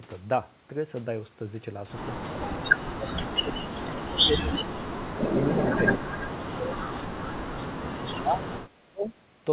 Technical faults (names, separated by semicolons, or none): speech suppressed in double talk; echo leak